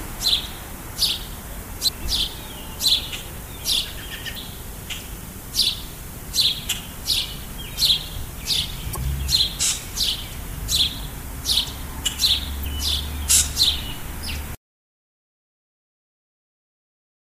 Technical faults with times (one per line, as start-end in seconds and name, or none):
1.84-1.89 damaged data in a compressed stream
4.33-4.37 damaged data in a compressed stream
8.93-8.97 damaged data in a compressed stream
12.61-12.65 damaged data in a compressed stream